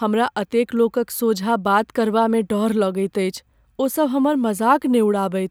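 No technical faults can be heard anywhere in the speech. There is nothing here that calls for a timestamp or an explanation.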